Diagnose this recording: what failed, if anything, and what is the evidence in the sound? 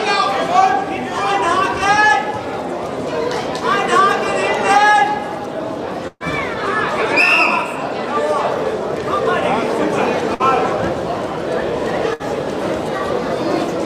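Network burst of packet loss at 6.07, 10.34 and 12.14 s: the last sound is held and fades, then resumes with 60 to 120 ms skipped.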